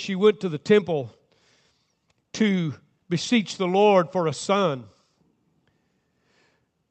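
Listening through this speech recording, nothing stood out as a technical fault, and the call path's band limit of about 8 kHz is simply part of how the audio sounds.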